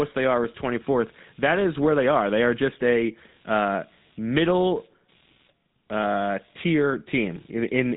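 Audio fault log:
Throughout: computer activity noise, a faint buzzing at roughly 150 pulses per second, about 40 dB below the speech, tracking the machine's load rather than the talking.
Throughout: GSM full-rate codec, gravelly buzzy roughness from pulse-driven vocal-tract modelling, nothing above 3.9 kHz, consistent with a 13 kbps stream, unlike plain band-limiting.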